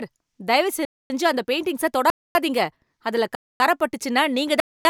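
Hard-edged 250 ms holes interrupt the speech at 0.85, 2.1 (after "அந்த பெயிண்டிங்ஸை"), 3.35 and 4.6 s: a gap between chunks, with silence inserted after each one-second block.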